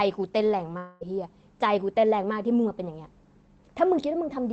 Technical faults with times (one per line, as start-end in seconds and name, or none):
0.77-1.03 long network dropout